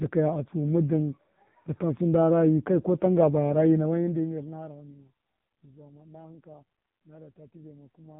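Across the whole clip the speech has been squeezed through the AMR narrowband mobile codec, the 2G and 3G phone codec, running at a very low bitrate: the damage fits a mode around 5.9 kbps. The codec samples at 8 kHz and rebuilds the voice from a vocal-tract model excited by sparse pulses, so nothing above 4 kHz survives. The result is a boxy, band-limited phone tone with a heavy buzzy, synthetic edge.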